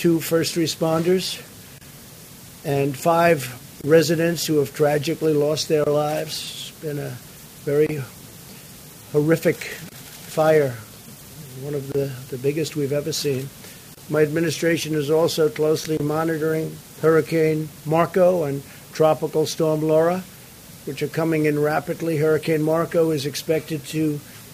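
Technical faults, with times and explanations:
Throughout, low bit depth with dither: sound quantised to 7 bits with dither, turning the rounding error into a steady, even hiss about 25 dB below the signal.
1.78 to 16.00 s, gaps at a join of encoded pieces: silences of 29 ms at 1.78 s and 27 ms at 3.81, 5.84, 7.87, 9.89, 11.92, 13.95 and 15.97 s, about every 2 s. Each comes from separately encoded pieces joined without trimming, so encoder start delay and final-frame padding remain, leaving dropouts with smeared edges before the sound resumes.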